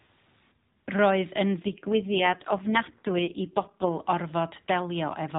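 Speech carried by the AMR narrowband mobile codec, with nothing above 4 kHz. From 1.60 to 3.92 s an AMR rate drop turns the voice rougher and more synthetic. The band stays the same. The added coarseness fits a network-ordered fall from 12.2 to 4.75 kbps.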